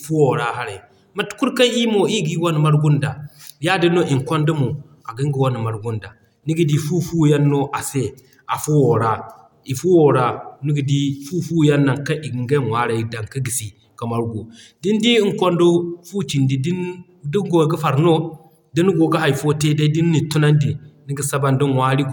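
No technical faults can be heard anywhere here.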